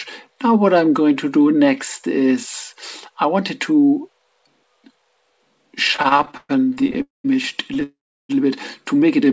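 From 5.92 to 7.02 s there are repeated stalls, a stutter. The sound keeps halting and resuming, 18 times in just over a second. Each gap is filled by stretching the last sound, the longest for about 120 ms. Together the fills take up around a third of that stretch. Packets were arriving late or too slowly. The jitter buffer kept running dry. Nothing is lost, but the audio drags and jerks.

Right after, from 7.02 to 7.26 s, comes a call audio freeze. The last sound carries on as a fading buzz, then falls silent for about 160 ms. The audio then resumes where it stopped. A second freeze runs from 7.83 to 8.31 s, with about 340 ms of silence before the audio resumes. The likely cause is packets held up in transit, emptying the jitter buffer. These gaps add delay without dropping any audio. Throughout, nothing is heard above 8 kHz, which fits a wideband call codec.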